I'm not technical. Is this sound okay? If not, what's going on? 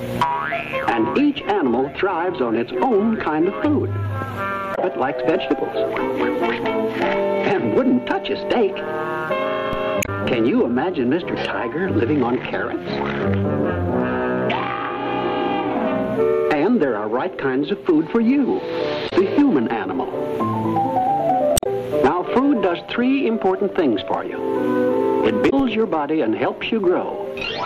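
No. Parts of the compressed audio file are damaged, so the player misreads those stretches and has to hunt for where the good data resumes. This damaged data in a compressed stream causes brief chirps or blips at 4.72, 9.99, 19.06, 21.54 and 25.46 seconds.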